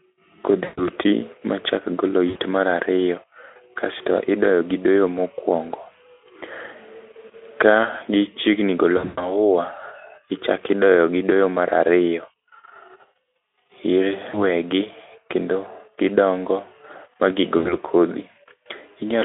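VoIP packet loss concealed by the speech codec hits at 0.63, 2.29 (before "mar ariyo"), 8.97, 14.29 and 17.58 s (after "gidongo ma"). Each gap lasts 40 to 180 ms. The Speex decoder stretches its last sound into a fading buzz or coloured noise, and speech stays weak briefly afterward.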